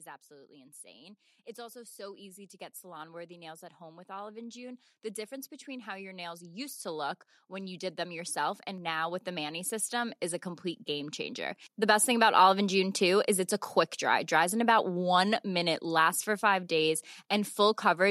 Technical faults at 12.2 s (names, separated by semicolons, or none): automatic gain rising